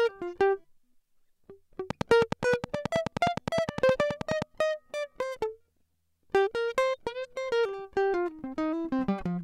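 A train of clicks runs through this music from 1.90 to 4.43 s: around thirty near-identical ticks at a steady 9.5 per second, standing well above the music, likely from a repeating pulse of electrical interference or a faulty connection or power supply.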